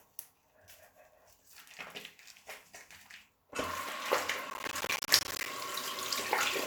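From 4.5 s to about 5.46 s there's a stretch of processor overload crackle. The machine couldn't keep up with its small audio buffers, roughly 10 ms each, and missed something like fifty deadlines across that second. Each miss drops in a tiny hard-edged slice of silence, so the sound picks up a gritty, tearing crackle riding on top. It clears once the load eases off.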